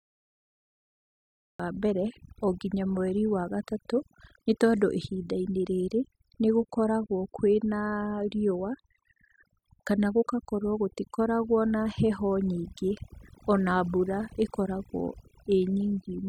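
For the first 1.6 s the clip is pure digital silence, and at 1.60 s the speech cuts in partway through a sound. This is a cut-off start: the recording or stream only began capturing after the talker was already mid-utterance, so there is no natural onset or rise in level. On a waveform the trace is a dead-flat line that jumps straight into the speech. A spectrogram shows an empty field ending in a hard vertical edge.

Across the whole clip there is overdone noise removal. A noise reducer set too aggressively pulls individual frequency bands down to nothing whenever they sit close to its noise estimate, taking the quieter parts of the speech with the hiss. The pauses fall to near silence scattered with brief twinkling specks. A spectrogram shows a mottled, patchy image with isolated bright dots speckling otherwise black gaps, and the faint harmonics and breathy detail around the speech are eaten away.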